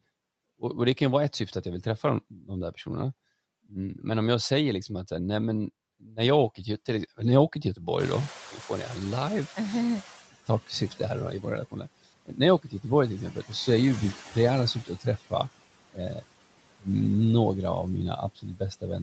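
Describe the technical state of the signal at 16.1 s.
At 16.1 s the speech is caught by the noise suppressor, which is cutting speech between 15.93 and 16.24 s. Over roughly 150 ms within that span, the suppressor mistakes the quieter part of the speech for background and pulls it down with the noise, by about 16 dB at its deepest. The affected speech there sounds swallowed and faint rather than missing. That distinguishes it from a packet-loss dropout: the sound fades into the lowered noise floor smoothly, with no hard gap, click or synthetic fill.

Underneath, noise suppressor artifacts run through the whole clip, and at this point they work against the room noise that rose earlier, at about 8 s. The suppressor lowers the bands it judges to be steady noise by about 17 dB frame by frame. Unlike codec coding noise, this residue pumps with the speech, sinking in pauses and rising under words.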